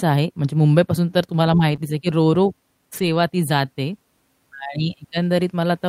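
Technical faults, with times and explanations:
1.71 s, lost packet rebuilt from error correction: a single 20 ms frame plays back grainier and noisier than its surroundings, with no gap. The original packet never arrived, so the decoder used the low-bitrate redundant copy carried in the following packet, Opus in-band forward error correction, which keeps continuity but loses fine detail.
1.75 to 1.79 s, short concealed packet loss: about 20 ms of speech is missing and replaced by roughly 21 ms of synthesised fill, heard as a brief smear or wobble right after the previous event. No redundant copy was available, so the receiver extrapolated the preceding sound, following its pitch if voiced or using shaped noise if not, then crossfaded back into the real signal. That guesswork blurs the transition and can swallow a short consonant.
2.93 to 3.07 s, lost packet rebuilt from error correction: 80 ms in all sounds rougher and hissier, which fits four separate 20 ms packets rebuilt from their low-bitrate in-band copies. 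The audio runs on without a dropout, but the reduced-rate reconstruction is audible for longer here than at 1.71 s.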